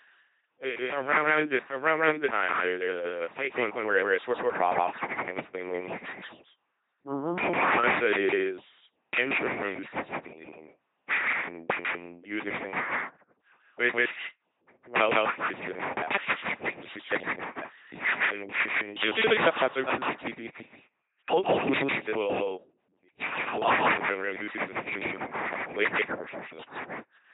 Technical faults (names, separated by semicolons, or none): doubled audio track; LPC-10 vocoder